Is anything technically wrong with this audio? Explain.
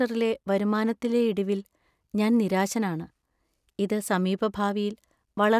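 No, there is no technical fault to report in this speech recording.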